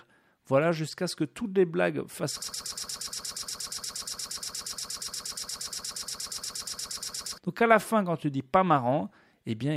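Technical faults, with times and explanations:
2.42–7.38 s, broken-record loop: right after "toutes les blagues fassent", a 118 ms fragment repeats 42 times, likely a stalled stream resending its last chunk, so that stretch is lost.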